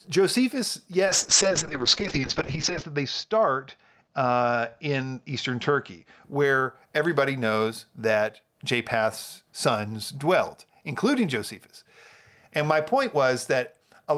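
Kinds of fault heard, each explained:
Call bitrate drop: from 1.07 to 6.29 s the speech turns rough and muffled, as the encoder, starved of bandwidth, codes more coarsely and cuts the top end from 20 kHz to 8 kHz, worst for 1.76 s, fitting a fall from 40 to 6 kbps.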